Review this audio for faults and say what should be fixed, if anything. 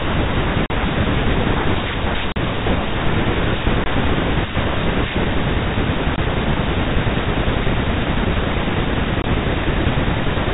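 The speech has packet loss filled with silence. Short holes cut into it at 0.66–0.70 s, 2.32–2.36 s, 3.84–3.86 s, 6.16–6.18 s and 9.22–9.24 s. The first two last 40 ms. The rest last 20 ms. Those lengths fit one or two lost 20 ms packets. The receiver played dead silence in each gap, so each hole starts and stops with a hard edge. The G.711 telephone band around the gaps sounds intact. Add packet loss concealment and a jitter buffer at the receiver, so missing packets are bridged rather than silenced.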